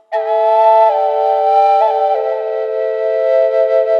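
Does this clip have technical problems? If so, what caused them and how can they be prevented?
No, this clip has no technical problems, so there is nothing here that needs preventing.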